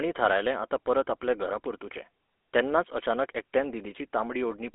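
From start to finish the speech carries the buzzy, gravelly roughness of the GSM full-rate codec, which fits the 13 kbps full-rate coder. The codec rebuilds the voice from a vocal-tract model driven by sparse, regularly spaced pulses, so fine detail is replaced by a rasping texture, plainly audible here. Band-limiting to a 300 Hz to 3.5 kHz line leaves a spectrogram empty above 3.8 kHz and thin below 300 Hz, with a smeared, grainy harmonic structure.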